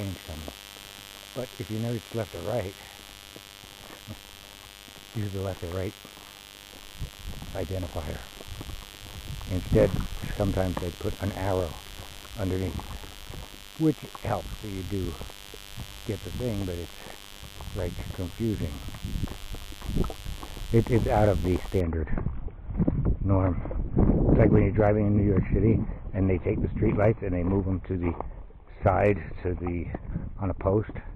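From 0.0 to 21.8 s a mains buzz sits roughly 20 dB below the signal. Switching spikes twice per 50 Hz cycle spread harmonics into kilohertz, sounding raspy rather than a smooth hum.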